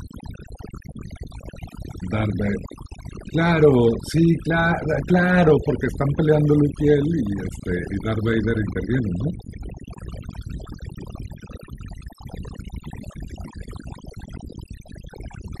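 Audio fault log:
Throughout, overdone noise removal: heavy spectral gating pulls near-noise bands down, leaving near-silent gaps with twinkling specks and quiet parts of the speech lost with them. On a spectrogram, patchy holes and isolated dots appear.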